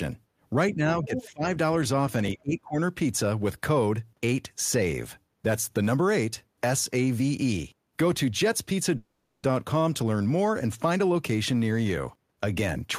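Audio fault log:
0.71–1.56 s and 2.35–2.77 s, speech suppressed in double talk: the echo canceller was likely unable to tell the near talker from loudspeaker echo while both sides spoke, so it turned the microphone signal down. In the first stretch the speech dips by up to about 15 dB across roughly 0.7 s in patches. In the second the speech drops harder, by up to about 25 dB over roughly 0.4 s.
1.15–1.28 s, other side's voice leaking through: the echo canceller likely left part of the loudspeaker signal in the microphone path. A brief scrap of a second voice comes through at about 5 dB below the main speech. It is short, about 0.13 s, and sits inside the first suppressed stretch, so it lands as a fragment over the dipping speech.
8.97–9.45 s, call audio freeze: packets were likely held up in transit and the jitter buffer ran dry. The receiver stretched the last sound across the wait for 460 ms, filling it with a sustained tail rather than silence. 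When packets resumed, the speech carried on where it had stopped, with nothing lost but everything afterwards running 460 ms later.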